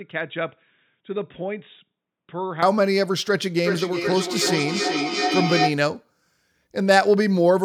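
From the start to 2.6 s the speech sounds dull, boxy and quieter by roughly 10 dB, likely from an input switched to a poorer device. From 3.63 to 5.83 s each word returns about every 0.4 s, up to about 4 dB below the speech, a feedback echo between two devices re-capturing each other's playback.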